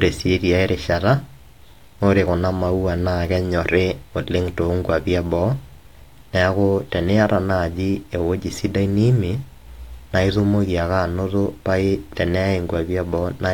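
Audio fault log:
No technical faults can be heard in this speech recording; the signal stays steady and intact across its whole duration.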